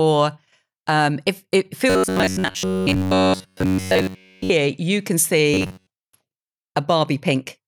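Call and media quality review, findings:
Robotic sound from repeated short buffers, 1.90–4.50 s: speech becomes a rigid metallic buzz at 93.8 Hz, following the syllables only roughly, with the whole stretch replaced by repeats. Likely cause is buffer underrun in the playout path, looping one 10.7 ms block while real audio is skipped.

Same fault, 5.54–5.90 s: identical 93.8 Hz buzz, shorter, with most of the audio repeated rather than all of it. Same probable component and mechanism.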